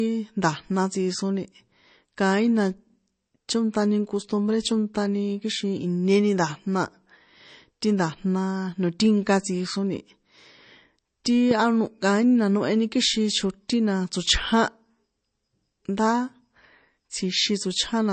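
Throughout the speech, there is plainly audible MP3 compression. Nothing reaches above 8.3 kHz, which fits a low bitrate of around 34 kbps. The encoder likely ran short of bits and discarded weaker frequency content, so parts of the sound flicker in and out from frame to frame, giving a watery, swirling quality, and onsets are smeared. On a spectrogram, the energy stops at a flat ceiling at 8.3 kHz, and below it sit scattered, blocky patches that switch on and off.

From 11.51 to 11.53 s, just before "anoh kaíni na noheni", a single loud pop sits on top of the speech, which carries on underneath it. It is likely a sudden voltage step or pulse, such as from a switch, static or a driver glitch, entering the signal path. It peaks at about 10 dB above the surrounding speech. On the waveform it is a narrow spike standing clear of the speech envelope, and on a spectrogram it is a thin vertical stripe across the frequencies up to the 8.3 kHz limit.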